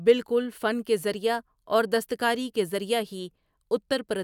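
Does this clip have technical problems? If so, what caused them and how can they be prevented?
No, there are no technical faults to hear in this speech clip. With nothing going wrong, there is no cause to trace and nothing that needs preventing.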